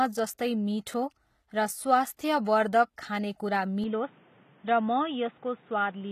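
A speech clip with two faults. Throughout, the treble sounds synthetic and nothing is present above 14.9 kHz. This is likely HE-AAC compression, at a rate that fits about 20 kbps, which rebuilds high bands by copying lower ones. From 3.84 s to the end, the sound turns narrow, with nothing above 3.8 kHz. It also drops about 5 dB and gains new noise about 30 dB below the speech, with no gap at the change. The likely cause is the input switching to a poorer device.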